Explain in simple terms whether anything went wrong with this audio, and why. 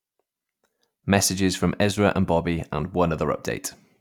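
Yes, there's one small glitch. At about 1.91 s the speech suddenly dips in loudness and stays that way until about 1.97 s, a brief drop of roughly a sixteenth of a second before it snaps back. That's most likely one channel dropping out: one side of the stereo recording went silent for a moment, so when both sides get blended together there's only half as much sound for that instant.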